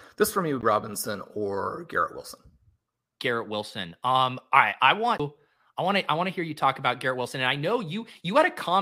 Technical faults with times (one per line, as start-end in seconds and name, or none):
0.61 CD skip
5.18 CD skip